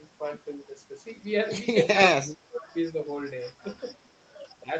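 From 2.11 to 2.74 s the speech sinks very deeply, nearly vanishing. At 4.63 to 4.70 s it dips briefly and mildly. This is likely speech suppressed in double talk.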